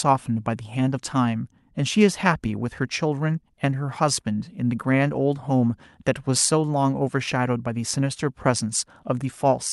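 Speech carried over a WebRTC call path with the Opus codec, its top end rolling off at about 12 kHz as expected for that link, and no technical faults found.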